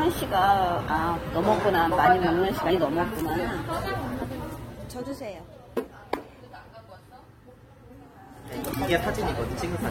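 Throughout, the sound is dull and smeared with a fizzy, plainly audible texture, likely AAC compression at a low bitrate, which fits AAC-LC around 32 kbps.

From 4.27 to 5.39 s, a fine ticking zipper noise rides on the sound as its level falls by roughly 15 dB in unsmoothed 1 dB steps, about ten per second. From 8.27 to 8.82 s, the same zipping returns as the level climbs by a similar amount in coarser 2 dB steps.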